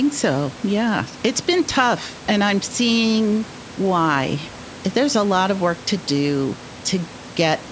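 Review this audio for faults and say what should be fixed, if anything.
No faults; nothing needs fixing.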